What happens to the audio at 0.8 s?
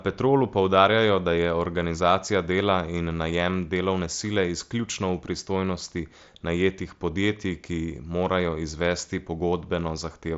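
Nothing goes wrong at 0.8 s: the speech carries straight through that moment with no dropout, click or other break.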